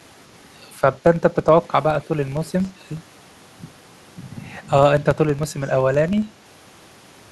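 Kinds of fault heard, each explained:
Filter restarted on every block: A filter loses its memory at each block boundary and starts again from silence, leaving a small tick. Here the ticks repeat at 21.5 Hz throughout, forming a low buzz that follows the speech level, which fits a 2048-sample block.
Echo leak: A faint delayed copy of the voice appears briefly, at 2.02 to 2.07 s and 5.66 to 5.7 s. It trails the speech by 161 ms, very quiet, around 35 to 40 dB down. The likely cause is a loudspeaker echo the far end's canceller missed.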